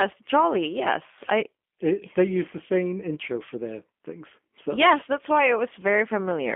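From start to finish the speech has plainly audible G.729 codec damage. Everything below about 200 Hz and above 3.4 kHz is gone, and the rough, synthetic edge comes from rebuilding the voice from filter and pitch parameters, which fits an 8 kbit/s VoIP link.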